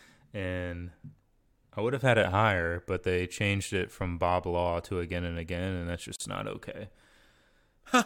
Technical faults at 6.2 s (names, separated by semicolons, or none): gap at a join of encoded pieces